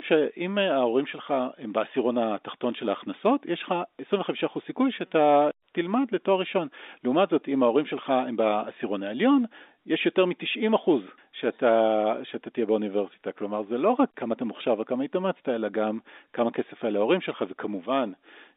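No faults are audible here.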